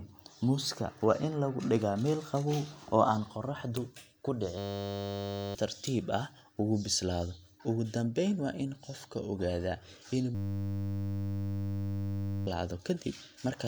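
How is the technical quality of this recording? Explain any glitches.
The speech is hit by two system hang loops, at 4.58 to 5.55 s and 10.35 to 12.47 s. In each, the playback froze while the hardware kept replaying one 10 ms chunk, so there's a steady 100 Hz buzz, with roughly one and then two seconds of speech lost.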